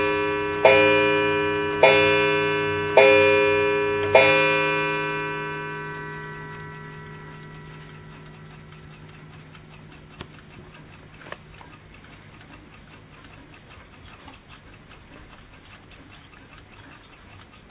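No faults can be heard anywhere in this recording.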